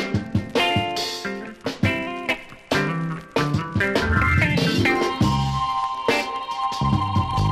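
Dull and granular from start to finish, the audio has a gurgling, watery distortion, with the top end thinning out and flickering as upper bands drop in and out. That is plainly audible MP2 compression, likely the result of encoding at a low bitrate such as 80 kbps. Layer II splits the signal into 32 sub-bands and rations bits among them. Starved of bits, it mutes the highest bands and quantises the remaining ones coarsely, which produces this muffled, churning texture.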